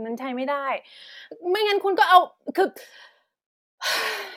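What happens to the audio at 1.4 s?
Nothing goes wrong at 1.4 s: the speech carries on intact through that moment, with no dropout, click, distortion or other fault.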